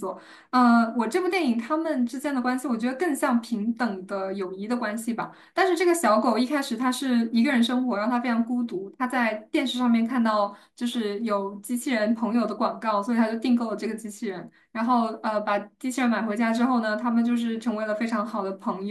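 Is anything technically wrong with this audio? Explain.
No, nothing is technically wrong with this audio.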